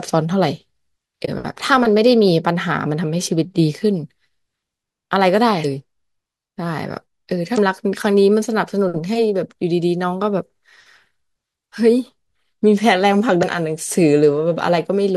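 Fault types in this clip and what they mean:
damaged data in a compressed stream: Corrupted bytes in the coded speech make the decoder misread a frame and hunt for the next valid frame header. The result is short disturbances of about 40 ms each at 1.24, 5.61, 7.54 and 13.39 s. A plain dropout would leave a silent gap, and a click is a single sharp impulse.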